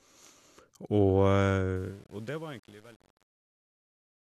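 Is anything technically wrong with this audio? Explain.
Yes. There is truncation distortion on the fade-out of this speech clip, from 1.76 s to the end at about 4.39 s, worst from 1.96 s onward. The level ramp starting at 1.76 s is itself smooth, but the stage applying it keeps too few bits, which fits roughly 8-bit resolution, with no dither. As the gain drops, the waveform collapses into coarse steps, so the tail turns gritty.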